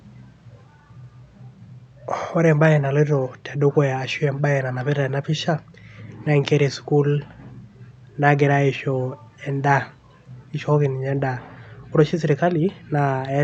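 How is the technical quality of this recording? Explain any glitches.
Nothing here counts as a glitch; the speech has simply come through a call codec, so the top end tops out at around 8 kHz, as you'd expect on a call, and there are no dropouts, clicks or other disturbances to point to.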